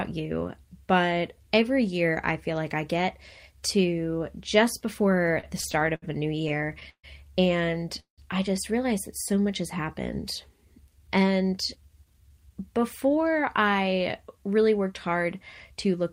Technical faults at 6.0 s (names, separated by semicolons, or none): repeated stalls (stutter)